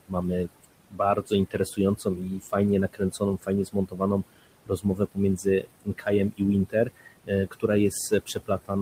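Crackle rides the loudest peaks across the whole recording: hard clipping, where the signal is driven about 4 dB past what a stage can pass, so a small fraction of peaks are sliced flat. The room's background noise sits about 15 dB under the speech, and it sinks in the gaps and swells beneath each phrase. These are noise suppressor artifacts, from gain cuts of about 21 dB applied band by band as the processor tracks the noise. From 0.47 to 2.53 s, and again from 2.93 s to the end, soft consonants and word endings turn faint or swallowed. This is speech cut by the noise suppressor, which mistakes those quiet parts for noise and pulls them down by about 19 dB and about 22 dB respectively at worst. In the first stretch the losses add up to somewhat under a second.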